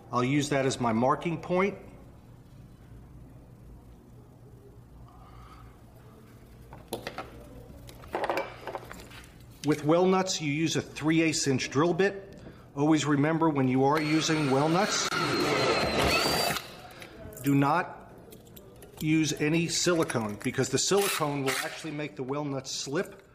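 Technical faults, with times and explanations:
15.09 to 15.11 s, gap at a join of encoded pieces: the sound drops out for about 27 ms and then picks up right where it left off, as though nothing was lost. That's what you get when separately encoded chunks are stitched together without trimming. The encoder's start-up delay and the padding on the final frame both stay in as silence. The codec smears the edges, so the truly silent part is shorter than the gap itself.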